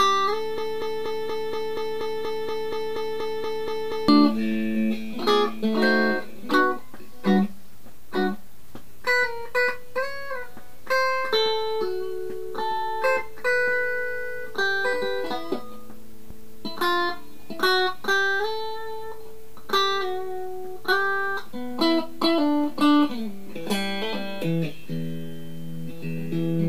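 From 0.58 to 4.08 s, a broken-record loop repeats one 0.24 s fragment fifteen times. The stream likely stalled, replaying its last piece. Audio from that span is lost.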